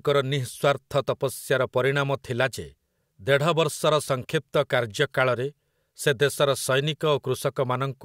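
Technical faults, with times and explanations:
Nothing to flag here: this speech recording comes across without any technical faults at any point.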